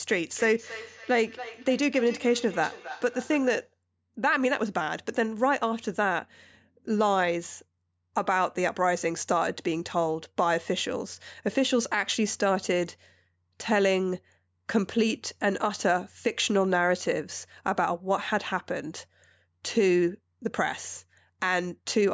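From 0.35 to 3.74 s there is feedback echo between two devices. Two devices in the same room share the call. One plays back what the other's microphone sent, and that microphone picks it up again. Each device's echo canceller removes only its own playback, so the loop stays open. The speech returns at a steady spacing of roughly a third of a second. The repeats peak at about 15 dB below the speech. The call's microphone processing limits everything to 8 kHz.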